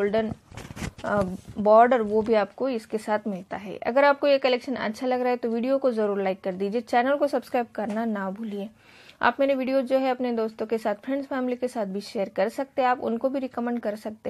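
Nothing technically wrong turns up anywhere in this audio, so there are no times or causes to point to.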